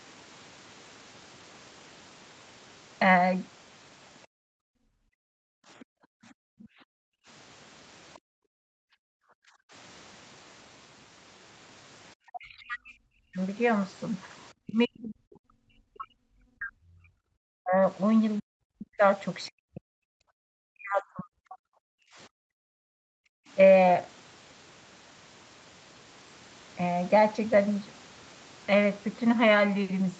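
From 4.27 to 7.27 s the room background is gated by the echo canceller: while the loudspeaker plays, the canceller pulls the microphone down by about 40 dB, so the ambience vanishes and then returns. On a waveform the noise floor flattens to near silence; a spectrogram shows a blank band across all frequencies up to the 8 kHz ceiling of the call path.

Inside that gap, from 5.8 to 6.67 s, the other side's voice is leaking through, likely because the canceller left a residue of the loudspeaker signal in the microphone. It sits roughly 30 dB below the talker, faint, as weak harmonic traces on the spectrogram.

A brief scrap of the same leak appears from 8.14 to 8.18 s, and the background is gated again from 8.19 to 9.72 s, with the same sudden flat stretch in the waveform.

From 12.26 to 13.39 s, and far longer from 14.65 to 21.65 s, the speech is suppressed in double talk. Both sides are likely talking at once, and the canceller turns the near talker down by as much as 40 dB. 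The voice dips and breaks into pieces, and the spectrogram shows the upper harmonics thinning and chunks of energy cut out. This affects about a second of the first span and about five seconds of the second.

Within that second span, from 18.38 to 18.43 s, another faint fragment of the far voice leaks through, roughly 30 dB down.

Finally, from 21.93 to 23.48 s, the background is gated by the echo canceller once more, dropping about 40 dB to a near-empty trace before the ambience comes back.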